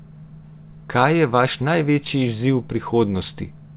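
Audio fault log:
Nothing in this speech stood out on listening.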